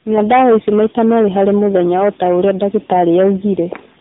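From the first moment to the end, the speech is hard clipped: peaks overdriven by about 13 dB are sliced flat, with roughly 7 percent of samples pinned at the limit. It sounds like harsh fuzz on every loud syllable. The waveform shows squared-off tops, and the spectrogram shows bright vertical smears of harmonics at each peak.

Tandem speech coding also runs throughout. The speech was decoded and re-encoded across several links, with at least three speech coders in a row. That degradation points to a chain ending in a narrowband coder like AMR-NB near 8 kbit/s. The sound is muffled, gritty and warbly. The spectrogram shows a hard ceiling at 3.8 kHz with nothing above it, and smeared, blotchy formant bands below.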